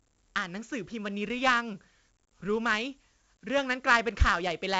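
From start to finish the speech carries 4-bit ADPCM compression, with heavy damage. Each sample is coded as a coarse step from a predicted value, so a gritty hiss rides on every loud syllable and sharp onsets smear where the step size lags. A spectrogram shows broadband noise filling the gaps between harmonics during voiced stretches and nothing above 7.8 kHz, which fits a 16 kHz sample rate at 64 kbps. The waveform looks fuzzy at peaks.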